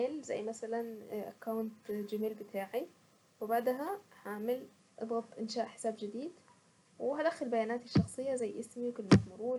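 From 0.80 s to 4.79 s a bright, metallic fizz sits above 12 kHz, about 30 dB below the speech and rising and falling with it. This is imaging from sample-and-hold upsampling. Each sample was repeated without smoothing, mirroring the spectrum into the 12 kHz to 24 kHz band, which fits a 24 kHz source doubled to 48 kHz.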